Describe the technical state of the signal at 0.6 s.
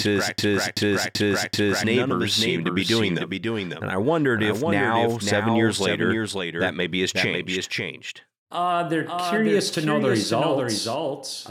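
A broken-record loop is under way at 0.6 s, running from the clip's start to 1.84 s. A 0.38 s fragment repeats back to back four times, likely because the stream stalled and resent its last fragment, so the intended audio is lost. A doubled audio track also runs throughout: a full-band copy about half a second late and about 5 dB quieter, with no room colour, likely from a second, slower capture path.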